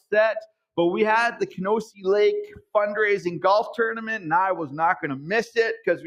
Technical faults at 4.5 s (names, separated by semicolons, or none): none